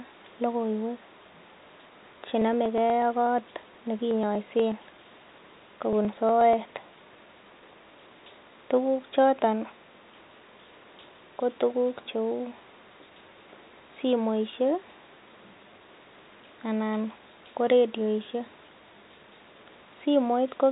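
From 1.69 s to 7.62 s the speech carries periodic USB or driver dropouts: a steady run of small ticks about every 0.121 s, roughly eight a second and around fifty in all. Each time, a few milliseconds of audio are skipped outright rather than filled with silence, so the waveform jumps ahead and clicks. The strict, even spacing, audible only under the talking and heard through the narrow telephone band, separates this from the irregular glitches of network packet loss.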